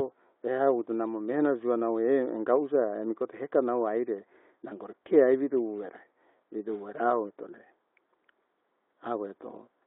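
Throughout, the speech sounds hollow and phasey, with a dull gap near 3 kHz. This is channel delay (comb filtering). One channel lags by roughly 0.2 ms, and summing to mono cancels evenly spaced frequencies, the first around 3 kHz.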